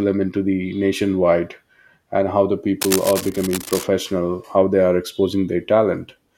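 From 2.81 to 3.84 s, a dense, uneven scratching rustle sits over the speech, fairly loud; this cable scratch noise likely comes from a worn cable or connector being moved.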